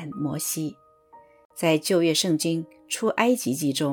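Corrupt frames decoded: a faint glitch at 1.45–1.52 s and a much louder glitch at 2.92–3.00 s, each from bit-damaged frames placing energy at wrong frequencies.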